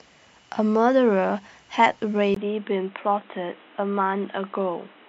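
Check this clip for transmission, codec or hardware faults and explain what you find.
One fault is present: at 2.34 s the speech abruptly loses its upper band and stays that way to the end of the clip, which most likely reflects the input switching to a poorer device. A brief gap of about 20 ms marks the switch. From there nothing is passed above 3.9 kHz, so sibilants and consonant detail go dull and boxy. The level stays about the same, but a different background noise appears, roughly 30 dB below the speech.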